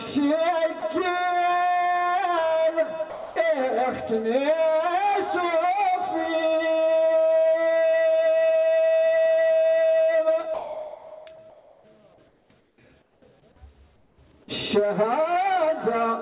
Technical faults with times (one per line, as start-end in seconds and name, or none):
0.80 sound dropped by the voice detector
3.10-3.36 sound dropped by the voice detector
10.54-11.84 sound chopped by the voice detector
12.28-13.22 comfort noise in place of the background
13.96-14.18 comfort noise in place of the background